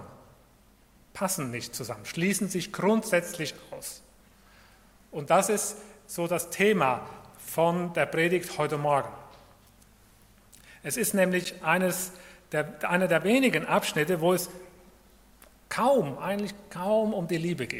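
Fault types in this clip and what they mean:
Block of digital silence: the audio drops to silence for 10 ms with no fade, so it sounds like one tick, not a soft dropout.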